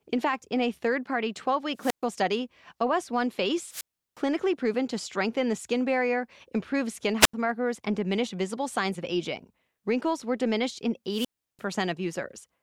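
The wireless microphone's radio signal fades until the receiver's squelch shuts the output, a wireless microphone squelch dropout: static, then silence of 123 ms at 1.76 s, 359 ms at 3.67 s before "proven to strengthen the", 83 ms at 7.20 s after "skin barrier improve skin", and 343 ms at 11.09 s after "were diminished in".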